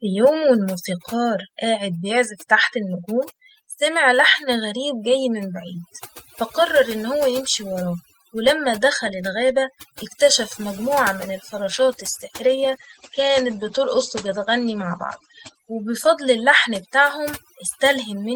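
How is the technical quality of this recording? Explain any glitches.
The quality is rough: heavy processing runs through the whole recording, and a second problem hits near the end.

The overdone noise removal lasts the entire clip. The noise reducer was pushed too hard, so it drops individual frequency bands close to silence whenever they look like its idea of the noise. Quieter parts of the voice get caught as well. That leaves a near-silent background dotted with twinkly specks.

The call bitrate drop starts at 11.59 s, right after "الغابة اكتشف مجموعة من", and runs to about 17.65 s. The call's bandwidth estimate fell, so the encoder was told to spend far fewer bits. What you hear is consistent with a fall from about 32 kbps to 12 kbps. The sound turns coarse and more muffled, and the top end shrinks from 20 kHz to 8 kHz. It stays at its worst for about 3.5 s before recovering.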